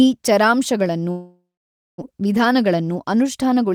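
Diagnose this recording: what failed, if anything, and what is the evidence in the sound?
The network stage failed first, with what sounds like a long network dropout from 1.11 to 2.04 s, right after "ಈ ಚರಾಂಶಗಳನ್ನು". The last sound is stretched into a fading buzz, then about 0.55 s of near silence follows, and roughly 0.6 s of speech never returns. On a waveform the envelope decays to a flat line. A spectrogram shows smeared harmonics thinning into a blank band. The likely cause is packets that stopped arriving, with concealment filling the gap until it gave up.

Next comes a jitter buffer speed-up from 2.12 to 3.65 s, also on the network and buffer side. The late burst of audio left the buffer holding more than its target, so the receiver repeatedly cut out one or a few pitch periods at a time to drain it, removing around 0.15 s in total. Speech runs about 110% fast at unchanged pitch and sounds hurried. 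A spectrogram keeps formant frequencies steady while syllables compress in time. A waveform shows tiny splices at periodic peaks.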